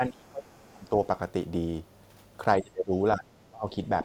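Speech suppressed in double talk: the sound dips hard from 0.0 to 0.98 s, then again at 2.61–2.94, 3.16–3.28 and 3.48–3.67 s, the third only shallowly. The likely cause is an echo canceller muting the near talker while the other side spoke, so the loss tracks overlap rather than being a packet-loss dropout.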